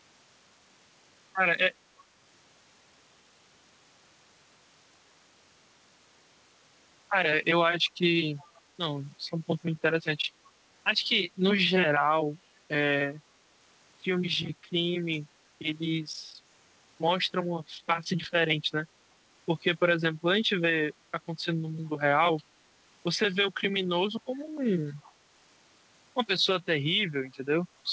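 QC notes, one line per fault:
8.38–8.61 s, 15.12–15.17 s and 25.03–25.12 s: echo leak. A faint copy of the speech returns 366 ms late, roughly 30 to 35 dB down. It likely comes from a far-end loudspeaker whose echo canceller let residue through. The band stops at 8 kHz, which fits G.722.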